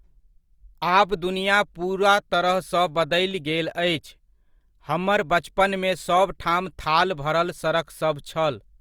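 Repeated buffer at 1.09 s and 3.31 s in this speech: audio arrived late, so the device replayed its last 5.3 ms piece once, heard as a click or brief buzz that fits a 256-sample buffer.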